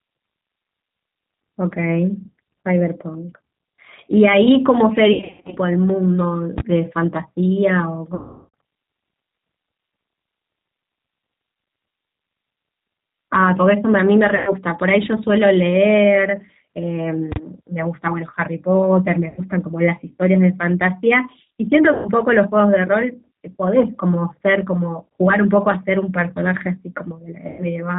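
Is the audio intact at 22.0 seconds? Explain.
No, at 22.0 s you're in the middle of a VoIP packet loss concealed by the speech codec, running from 21.94 to 22.08 s. The decoder lost roughly 110 ms of audio and stretched its last pitch and filter while turning the gain down, so the voice smears into a buzzy tone or coloured noise that fades. The whole clip also has the rough, slightly synthetic G.729 codec sound, consistent with an 8 kbit/s stream, with nothing above 4 kHz, so even the concealed stretch has that band-limited character.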